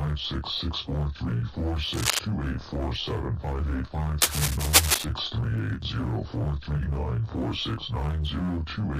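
Cable scratch noise appears from 1.93 to 2.19 s and from 4.21 to 5.05 s. Rough scratching bursts sit at about the audio's level, then louder. On a spectrogram they show as dense, ragged broadband smears, likely from a worn cable or connector being moved.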